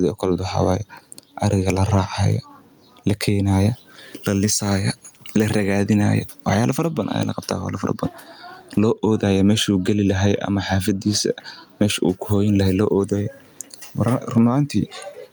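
Speech, with gain pumping throughout. The swing is around 10 dB. Loud and soft passages sit squashed together. The likely cause is gain set far too high, with a fast limiter clamping down.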